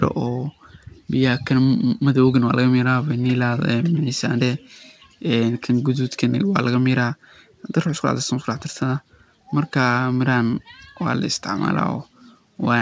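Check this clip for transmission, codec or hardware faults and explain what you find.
Nothing here sounds like a transmission, codec or hardware problem; the speech just has the ordinary character of a wideband call, with the top end stopping at about 8 kHz in a way that fits a G.722 link.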